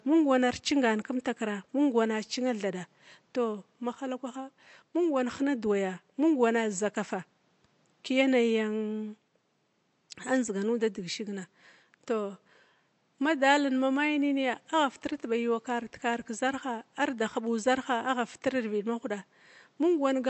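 Throughout the speech there is a watery, swirling quality, with s sounds turning metallic and attacks smearing. This is MP3 compression, likely at a low bitrate that fits about 48 kbps, switching weak frequency lines on and off between frames, while the room noise sits about 42 dB below the speech.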